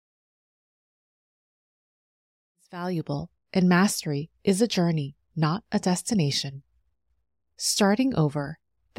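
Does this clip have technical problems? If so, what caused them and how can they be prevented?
No, there are no technical problems in this speech clip. The level fades in smoothly from around two and a half seconds and reaches full level at 3.35 s, with no step or click.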